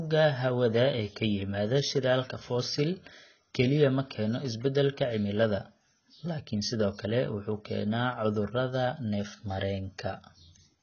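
AAC compression throughout: coarse low-bitrate quantisation, likely AAC-LC near 16 kbps, cuts everything above 6.5 kHz, leaving the speech dull, smeared and warbling.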